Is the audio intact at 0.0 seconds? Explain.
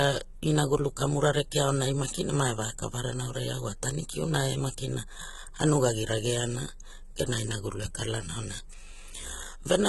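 No. At 0.0 s the speech already carries the HE-AAC compression damage that runs through the whole clip. The treble is heavily damaged, gritty and metallic, with s sounds lisping and nothing above 11.8 kHz. This is likely spectral band replication copying lower bands upward, which fits a bitrate around 16 kbps.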